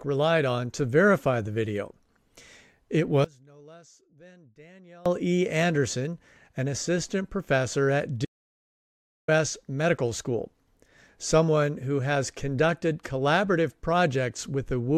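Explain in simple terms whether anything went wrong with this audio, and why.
From 3.24 to 5.06 s the speech suddenly drops to a faint whisper. This is a case of one channel inverted: one stereo side was likely flipped in polarity, so when both sides combine, the shared voice cancels itself.

Right after "an assistant professor at", at 8.25 s, the sound cuts to total silence for about a second, returning at 9.28 s. This is an audio dropout to silence. The input was likely lost briefly, so nothing but blank silence was recorded, and that stretch of speech is gone.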